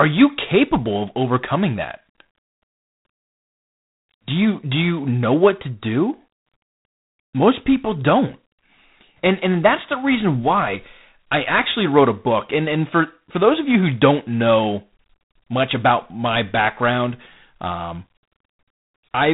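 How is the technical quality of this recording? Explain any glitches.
The quality is poor. The speech carries G.726 ADPCM coding damage for the whole clip, and it is plainly audible. This codec sends only the difference between each sample and an adaptive prediction. It spends very few bits on that difference, so the coarse steps turn into noise. The result is a harsh, rasping hiss that rises and falls with the speech level, which fits the 24 kbit/s mode. Nothing above about 3.9 kHz survives, so the sound is dull and telephone-like.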